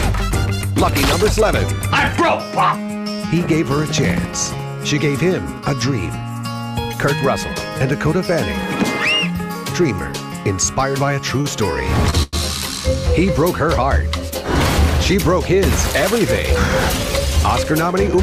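At 11.41 s a short stall from a late packet holds the sound for about 28 ms, until 11.46 s. The jitter buffer ran dry, so the receiver stretched the last bit of sound. It gives a slight buzz or dip. Nothing is lost, and playback resumes from the same point. A second stall follows at 12.10 s, lasting about 26 ms, until 12.15 s. Each stall pushes the audio later by its own length.

At 12.23 s a call audio freeze runs for about 100 ms, to 12.35 s. The last sound carries on as a fading buzz or hiss. It never drops to full silence. The likely cause is packets held up in transit, emptying the buffer again. When the audio returns, it continues where it stopped. Nothing is missing, but another 100 ms gap has been inserted.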